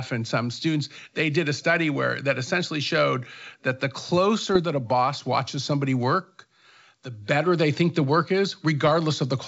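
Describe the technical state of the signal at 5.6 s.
At 5.6 s the signal is intact, with the speech passing cleanly through G.722 wideband telephone coding at 64 kbit/s and no fault present at that moment.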